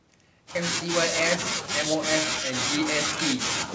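From start to finish, the speech carries a trailing echo. This is echo with no canceller. The far end played the call through a loudspeaker, and its microphone caught that sound and sent it straight back. Nothing stripped it out. So each phrase returns about a fifth of a second later, around 19 dB quieter. The copy sounds thin. It follows the speech like a faint shadow. Both paths are cut off above 8 kHz, which fits a G.722 call.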